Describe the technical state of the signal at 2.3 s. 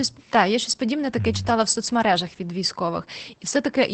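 At 2.3 s the speech carries Opus voice compression, present across the whole clip rather than at that instant alone. The codec is in its SILK linear-prediction mode at wideband, with the excitation coded coarsely, which fits a low rate around 12 kbps. The result is plainly audible: muffled, slightly hoarse and faintly robotic. A spectrogram shows a hard ceiling with nothing above about 8.7 kHz, while the waveform looks normal.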